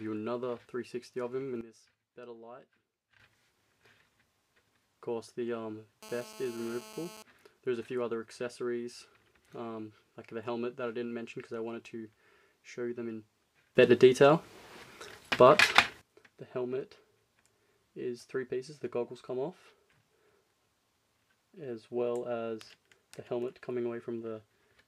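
The audio has two sudden gain jumps and a stretch of GSM phone buzz. From 1.61 to 3.20 s, everything, background noise included, drops by about 14 dB in one step and then snaps back up. From 13.75 to 16.01 s it goes the other way, about 15 dB louder, before returning. Both sound like the level being switched instantly rather than faded, most likely a digital gain setting or bit shift applied from one sample to the next with no ramp. Between 6.03 and 7.23 s there's a hard, raspy buzz at 217 Hz, rich in harmonics and sitting about 13 dB below the signal. It is nearly steady, which fits a nearby 2G phone on a call. Its bursty radio transmissions get rectified by the audio circuitry and come through as that buzz, with no connection to the sound itself.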